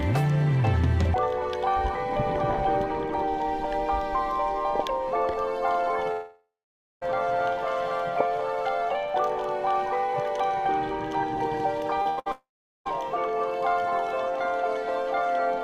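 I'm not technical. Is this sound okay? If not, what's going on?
No, there are a few gaps where parts of the audio went missing.

From 6.11 to 7.03 s, and again from 12.32 to 12.87 s, the sound trails off into a fading buzz or hiss and then about half a second or a bit less of near-silence before picking up again further on. That's a long network dropout, likely from the connection stalling so nothing arrived and those parts are simply gone.

At 12.02 to 12.07 s there's a quick smear or wobble where a few hundredths of a second didn't arrive in time. That's short concealed packet loss: the receiver papered over the hole by stretching the previous sound, then slid back into the real audio.

Right after, from 12.09 to 12.19 s and 12.19 to 12.28 s, you get two back-to-back bursts of packet loss, each 60 to 80 ms long. Here the last sound is held as a fading buzz or hiss, and then the audio jumps ahead, skipping what was lost in between.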